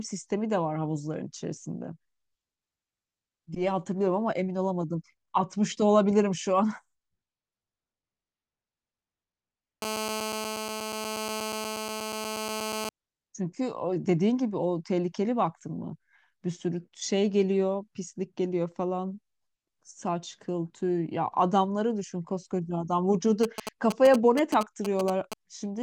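GSM phone buzz runs from 9.82 to 12.89 s. A nearby 2G phone in a call transmits 217 bursts per second, and the audio circuit rectifies the pulses into a steady, raspy 217 Hz buzz full of harmonics, about 6 dB below the speech and unrelated to it.

GSM signalling bursts follow from 23.43 to 25.34 s. The phone sends only brief groups of radio bursts, which the circuit again rectifies. The result is a galloping dit-dit-dit of short 217 Hz buzzes, only a few decibels below the speech.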